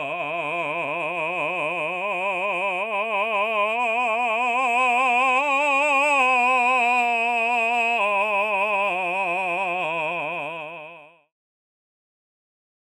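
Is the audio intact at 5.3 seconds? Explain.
Yes, the music is intact at 5.3 seconds, with no dropout, click or other fault audible at that moment.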